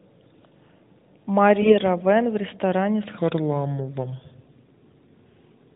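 Speech carried over the AMR narrowband mobile codec, band-limited to below 4 kHz, is hit by AMR bit errors from 1.62 to 1.76 s. A weak link flipped a few percent of the less protected bits in a handful of frames, while the checks on the critical bits still passed, so the decoder used them. The misplaced excitation pulses and skewed gain and spectral values make that stretch of speech turn briefly hoarse, scratchy and gargly, though pitch and loudness stay roughly in place.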